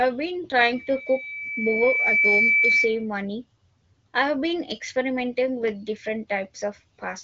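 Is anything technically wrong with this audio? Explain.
Yes. From 0.62 s to 3.06 s the speech is overrun by loudspeaker feedback squeal: a steady tone at 2.3 kHz that swells over roughly a second and a half until it sits a little above the level of the speech. A microphone is picking up the loudspeaker it feeds, and at 2.3 kHz the loop gain exceeds one, so that frequency reinforces itself on each pass until it stops at about 3.06 s. The speech is carried in the AMR wideband (HD Voice) codec, with its usual top end of about 7 kHz.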